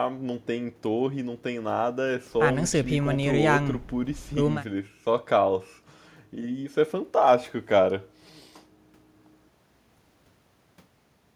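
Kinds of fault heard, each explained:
No technical faults detected in the speech signal.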